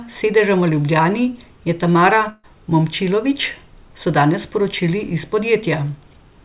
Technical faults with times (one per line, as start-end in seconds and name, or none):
2.30-2.45 burst of packet loss